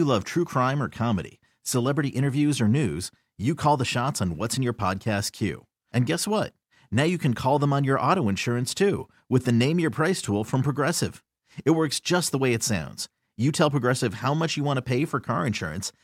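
For the first 2.0 seconds this speech clip sounds dull, with a treble that seems synthetic rather than real and stronger codec smearing, then at 2.0 s it snaps to a clearer, fuller sound with no gap. This is an adaptive stream starting at a low bitrate: the player opened on a cheap version, which points to something like HE-AAC near 40 kbit/s, then stepped up to a higher-quality AAC rendition around 96 kbit/s.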